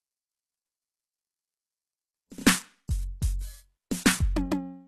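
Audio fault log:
Throughout, HE-AAC compression: the codec likely encoded only the lower spectrum and rebuilt the treble from copied lower bands, which fits a bitrate near 16 kbps. The music's highs sound gritty and metallic, the damage is plainly audible, and nothing remains above 12.3 kHz.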